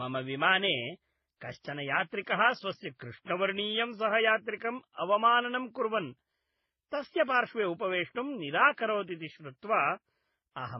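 Transcoding between lossy codecs runs throughout: the speech stops near 5.9 kHz and carries the layered artefacts of several codecs heard together. This likely comes from a chain of low-bitrate encodes, each later codec preserving the earlier damage and the lowest cut-off while adding its own.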